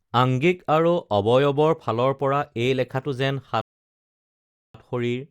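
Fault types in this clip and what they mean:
Rebuffering stall: playback ran short of downloaded data and paused, so the speech drops to silence from 3.61 to 4.75 s, then resumes exactly where it stopped.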